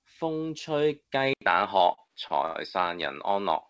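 At 1.33 s, after an 80 ms silence, the sound turns duller and boxier, with nothing above 5.2 kHz, a level shift of about 5 dB and faint new background noise. This is likely an input switched to a poorer device, not a codec change, since tone and noise change too.

From 1.78 to 2.56 s, repeated stalls (stutter): five gaps, the longest 87 ms, are bridged by stretching the last sound, so the audio drags rather than dropping anything.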